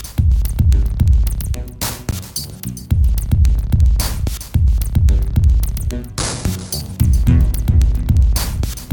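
At 2.11 s the music drops into a block of digital silence for about 15 ms, a buffer likely left unfilled, heard as a tick or dip.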